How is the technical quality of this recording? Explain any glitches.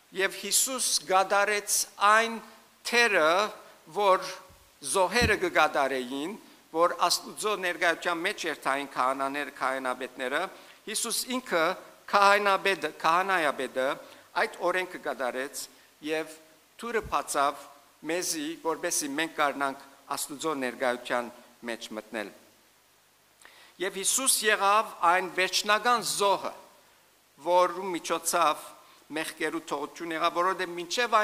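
Nothing stood out on listening that would count as a glitch or technical problem in this recording.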